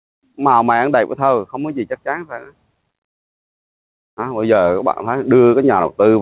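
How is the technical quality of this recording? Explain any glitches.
The recording has one fault, gain pumping, present throughout. The gain swings by around 10 dB. Input gain is likely set too high, with a fast limiter pulling it down. Nothing reaches above 4 kHz, which fits a G.711 mu-law call codec.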